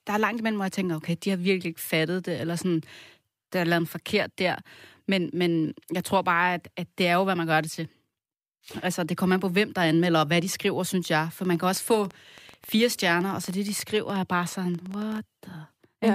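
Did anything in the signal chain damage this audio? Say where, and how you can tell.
Yes. From 11.45 to 15.19 s a train of clicks, about 40 uniform pulses at an irregular 9.9 per second, rises a few dB above the speech, pauses included. This likely points to interference in the analogue wiring or a faulty connection or power supply, not codec dropouts, which would leave gaps.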